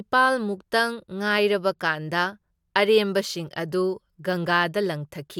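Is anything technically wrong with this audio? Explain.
No, nothing technically wrong can be heard here.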